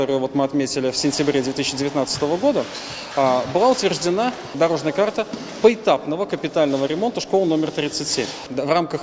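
Nothing in the audio stands out as a technical fault at any point, so there's nothing here to flag.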